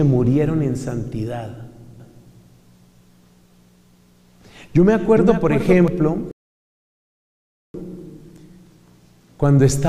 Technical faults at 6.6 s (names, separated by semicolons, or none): rebuffering stall